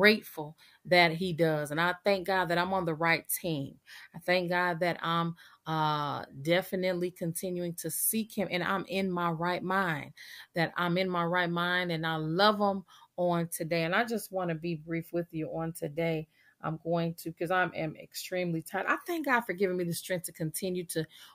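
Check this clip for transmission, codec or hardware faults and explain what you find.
No transmission, codec or hardware fault can be heard anywhere in the speech, and the signal stays continuous and steady throughout.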